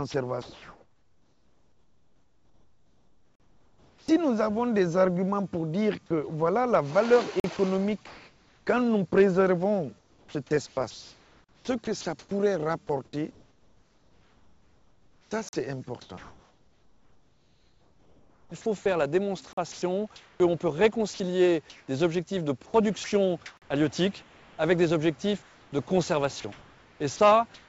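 From 0.12 to 4.08 s the sound keeps breaking up: quiet edges and soft passages drop away and a flat hiss takes their place, about 3.6 s of it in total. This is sound chopped by the voice detector. The sender's detector is likely switching repeatedly between sending and pausing, and during each pause the receiver plays comfort noise instead of the real signal.

At 3.35 s comes the first of six short holes, each 44 ms long, repeating every 4 s: 3.35, 7.40, 11.44, 15.49, 19.53 and 23.57 s. These are gaps between chunks. The audio was handled in 4-second blocks, and a short stretch of silence sits at every join. Nothing is missing, but the flow stops dead at each seam.

At 7.57 s a 20 ms sliver of sound is lost and replaced by steady noise, the sound dropped by the voice detector. The detector likely judged that brief moment to be background and stopped sending, so the receiver filled it with synthetic noise.

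From 7.57 to 8.67 s the background loses its texture and turns into an even, featureless hiss for roughly 620 ms of that stretch. This is comfort noise in place of the background. With no sound detected, the sender likely went into discontinuous transmission, and the receiver generated noise shaped only roughly like the real ambience until transmission resumed.

The chopping returns from 9.99 to 24.58 s, where about 7.3 s of material gives way to comfort noise, and it comes back once more from 25.42 s to the end. Throughout, the call codec, consistent with G.722, leaves nothing above 8 kHz.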